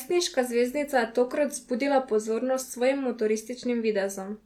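Speech, with no audible technical faults anywhere.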